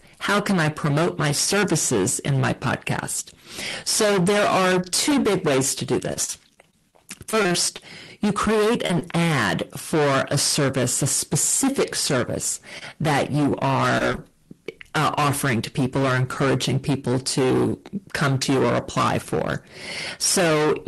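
Hard clipping runs through the whole recording. The speech is driven about 23 dB past what the chain can pass, so roughly a third of all samples are cut flat. Every loud syllable carries a harsh fuzz. The waveform shows squared-off plateaus, and the spectrogram shows harmonic haze spreading upward.

From 6.13 to 7.80 s there is repeated packet loss, heard as robotic sound. About ten holes, the longest 40 ms, add up to 160 ms of missing audio. The receiver patched them with 250 ms of continued sound, about 15% of the stretch. The result is choppy, with pieces missing. On a spectrogram, smeared, frozen-looking slices repeat along the stretch.

Short concealed packet loss appears twice, at 8.86 to 8.91 s and at 8.99 to 9.03 s. Each time about 20 ms never arrived and was filled by extending the preceding sound, with 31 ms and 18 ms of patching respectively. Each is heard as a quick smear or wobble. 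The spectrogram shows a thin blurred band where the detail briefly stops changing.

Scattered short gaps occur between 12.79 and 14.19 s. Roughly five isolated holes, none longer than about 30 ms, total 100 ms missing and were covered by around 100 ms of continuation. The speech stays intelligible but hiccups briefly. Small smudged notches are spread unevenly across the spectrogram there. The Opus call path limits everything above 12 kHz, which fits a bitrate near 24 kbps.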